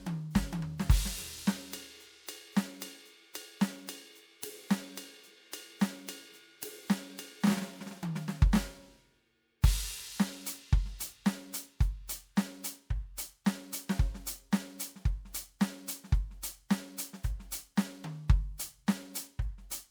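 From the first moment the music carries generation loss: a swirly, hollow smear with blurred attacks and holes in the spectrum, worse than a single MP3 pass would leave. The likely cause is repeated lossy coding, a few rounds of decoding and re-encoding in a chain that fits 128 kbit/s MP3, each pass quantising on a shifted frame grid so the damage stacks. Unlike one low-bitrate encode, the artefacts sound layered rather than simply dull.

From 0.77 s to the end, periodic clock jitter adds a rough, metallic edge. The converter's clock is being shaken at around 1 kHz, so every component of the music grows sidebands spaced about 1 kHz above and below it, strongest on the higher material. Broadband noise would not behave this way: this edge follows the music, tracks pitch, and disappears in silence instead of sitting underneath as a constant hiss.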